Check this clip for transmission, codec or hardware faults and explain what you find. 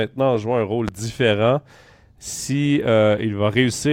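One hardware-type fault stands out: a single loud pop in the speech.

It comes at 0.88 to 0.90 s, right after "en jouant un rôle" and just before "différent si". It is one sharp click-thump, around 10 dB louder than the speech. The likely cause is a sudden voltage step or pulse, from a plug, switch, static discharge or driver glitch. The following circuitry shapes that pulse into a brief transient. The speech continues underneath without a break.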